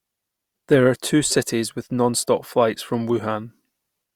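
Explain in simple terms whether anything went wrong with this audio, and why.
Nothing went wrong here: no technical faults can be heard anywhere in the speech.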